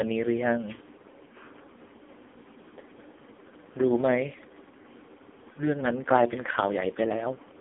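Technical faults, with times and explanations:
Throughout, AMR narrowband mobile codec: the speech sounds buzzy, thin and synthetic, confined to roughly 250 Hz to 3.6 kHz with nothing above 3.5 kHz, as if heard over a mobile call. The heavy damage fits AMR-NB's lowest 4.75 kbps mode, which rebuilds speech from a sparse vocal-tract model.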